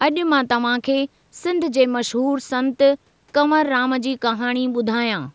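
No technical faults can be heard anywhere in the speech. The sound has the narrowed, wideband-headset character of a Bluetooth mSBC link after call microphone processing, with nothing above 8 kHz.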